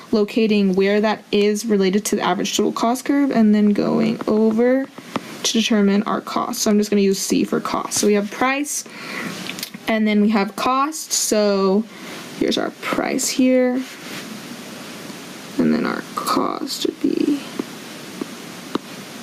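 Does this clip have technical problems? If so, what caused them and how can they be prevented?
Yes. Gain pumping runs through the whole clip: the gain is pulled down on each loud sound, with a swing of roughly 20 dB, so loud and soft passages sit unnaturally close in level. The likely cause is input gain set far too high, with a fast limiter or compressor clamping down on each peak. On a waveform the envelope looks flattened. A spectrogram shows the overall level dropping under loud sounds. To prevent it, lower the input gain so peaks land well below full scale and the limiter rarely acts.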